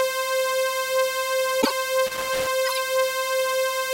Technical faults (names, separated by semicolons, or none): corrupt frame decoded; loose connector crackle